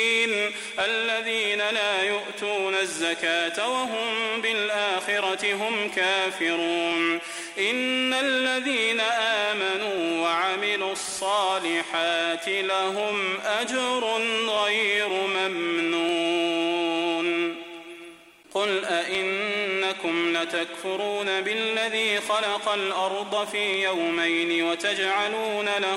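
Clock drift buffer slips run from 0.81 s to 25.26 s: a click or pop recurs every 1.53 s, around fifteen times in all, wherever there is signal. The likely cause is two devices running on separate clocks that disagree by roughly 100 parts per million, so the buffer between them creeps toward empty or full until a handful of samples, around seven, is skipped or doubled. That jump in the waveform is what produces each tick.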